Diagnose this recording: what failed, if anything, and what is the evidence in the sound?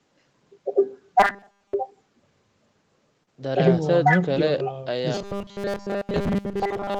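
From 1.20 to 1.74 s, and again from 5.15 s to the end, the speech becomes a rigid metallic buzz locked at 200 Hz: robotic sound from repeated short buffers. That pitch fits a 5 ms block looped while most real audio is skipped, likely a starved driver or buffer. Unlike concealment, it persists.

Short concealed packet loss, a network-stage fault, occurs at 3.23–3.29 s (about 40 ms missing, 33 ms filled) and 4.35–4.38 s (20 ms missing, 15 ms filled). The receiver extended the last sound, then blended back, leaving a brief smear. It passes quickly, with no fixed buzz.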